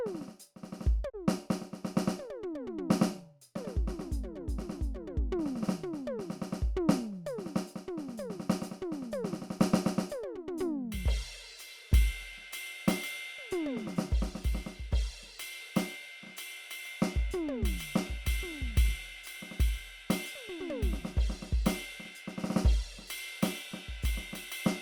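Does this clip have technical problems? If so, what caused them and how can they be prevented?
Yes. A digital broadcast dropout at 1.08 to 1.16 s mutes the music with a 20 ms fade, consistent with one corrupted frame being discarded. Stronger reception or a better antenna prevents it.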